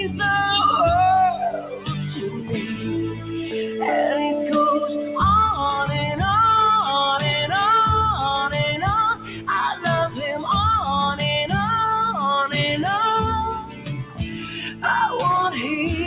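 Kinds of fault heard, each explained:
Noise suppressor applied to music or sounds: A suppressor tuned for speech stayed switched on, so it keeps reading steady, sustained parts of the sound and their tails as background noise and pulling them down. Sharp onsets get through, but anything held sinks afterwards, giving a pumping, thinned-out feel. The level swing it causes runs to around 10 dB across the clip. All of this sits inside a narrow band with nothing above 4 kHz, which fits a G.711 call path.
Sound cut by the noise suppressor: These are the spots where the suppressor clamped down harder than usual and the sound dips before recovering. There's a cluster early on, at 1.58–1.9 s, 2.14–2.86 s and 3.12–3.34 s, with drops of about 9, 8 and 7 dB. The deeper ones come later, about 12 dB at 9.15–9.48 s and about 13 dB over the longest stretch, 13.55–14.84 s.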